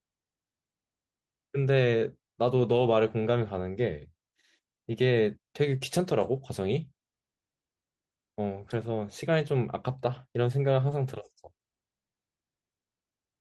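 At 2.63 to 2.93 s, 3.73 to 3.83 s, 8.59 to 8.73 s and 10.87 to 10.93 s, lost packets were rebuilt from error correction. Later packets held low-bitrate copies. So nothing drops out. The speech just turns briefly rougher and noisier.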